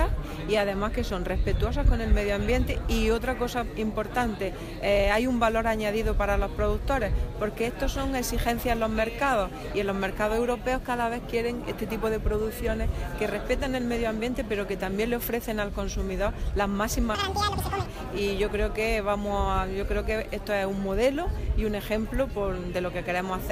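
At 17.15 s, running to 17.86 s, you get audio read two samples at a time: each pair of samples is taken as one frame, so that stretch plays at double speed and a full octave up.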